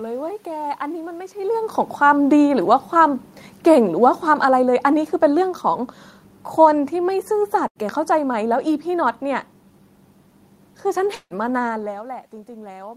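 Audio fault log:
3.63–5.93 s, automatic gain falling: the gain control judged the input too loud or its background noise too strong and eased it down by about 4 dB, so speech and background sink together.
7.67–7.78 s, burst of packet loss: the receiver stretched the last sound for about 80 ms, fading it as a buzz or hiss, then resumed with about 80 ms missing.
11.15–11.33 s, long network dropout: the sound is held and fades for about 150 ms, then about 60 ms of silence, and it returns with about 160 ms gone, likely because no audio arrived.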